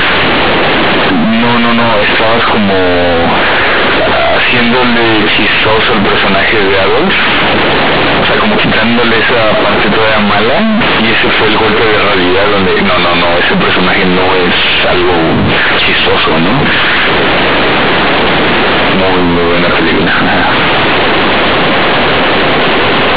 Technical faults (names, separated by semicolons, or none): companded audio read as linear